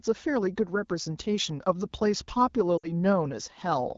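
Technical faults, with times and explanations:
2.77 to 2.88 s, lost AMR speech frames: the wideband decoder repeats the last good pitch and vocal tract settings with falling gain, which fits about three lost 20 ms frames. On a spectrogram the harmonics flatten and fade, and the waveform envelope sags before recovering.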